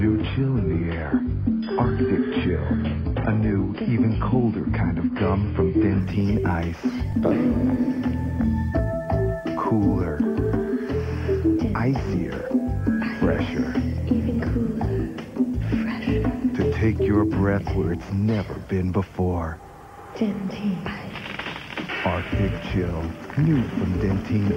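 Adaptive stream starting at a low bitrate, 0 to 6.0 s: the audio begins on a low-bitrate version with nothing above 5.1 kHz, then quality improves abruptly without a gap.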